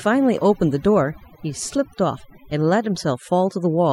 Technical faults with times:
0.00-3.92 overdone noise removal

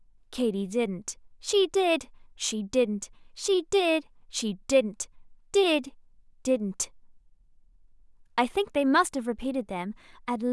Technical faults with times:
none

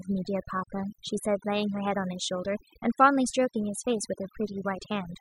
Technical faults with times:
0.00-5.21 overdone noise removal

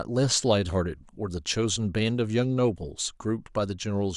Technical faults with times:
none

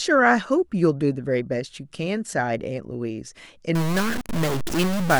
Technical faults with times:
3.75-5.20 stuck bit

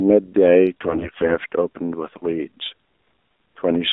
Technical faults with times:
0.00-3.92 AMR narrowband mobile codec
0.82-1.34 AMR bit errors
2.98-3.12 AMR bit errors

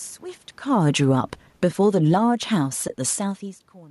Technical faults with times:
0.72-3.31 automatic gain falling
2.88-2.90 AAC frame loss with muting

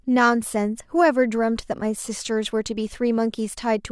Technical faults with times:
none

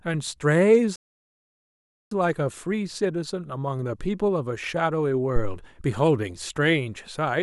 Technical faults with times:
0.96-2.11 playback stall

